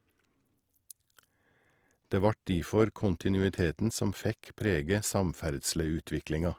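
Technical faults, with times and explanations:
Throughout, Opus compression: the speech has a grainy, rough texture, with noisy fizz filling the upper bands instead of the watery swirl and dropouts typical of MP3. The sound still extends to about 20.4 kHz, so it is not muffled. The likely cause is Opus in its CELT music mode, which keeps each band's energy but fills starved bands with folded or noise content, and the roughness fits a low rate near 24 kbps.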